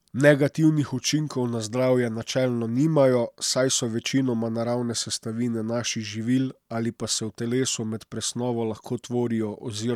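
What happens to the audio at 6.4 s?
Nothing goes wrong at 6.4 s; the speech carries straight through that point with no dropout, click, distortion or other break.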